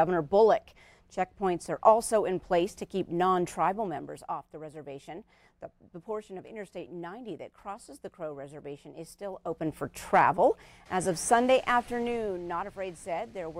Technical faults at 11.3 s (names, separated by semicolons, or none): none